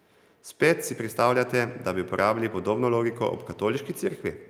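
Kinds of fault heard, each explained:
GSM signalling bursts: a nearby 2G phone's radio bursts get rectified by the circuit, so from 1.01 to 3.37 s there's a galloping ticking buzz at 217 Hz, well below the speech.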